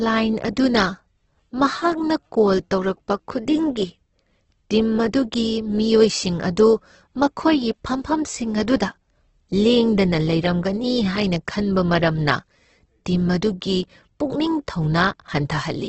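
From start to finish the speech carries heavy damage that's likely Opus compression, running in its CELT music mode at a very low rate, somewhere around 12 kbps by the sound of it. Nothing gets through above about 8.2 kHz, so the top end is simply gone. Starved of bits, the encoder fills bands with folded or noise-like content rather than leaving holes, which gives the voice a rough, grainy, noisy texture instead of a swirly one.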